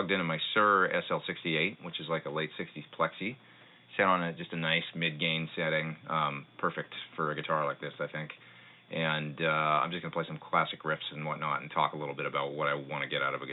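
No technical faults can be heard anywhere in this audio. Nothing in the sound needs a timestamp or a repair.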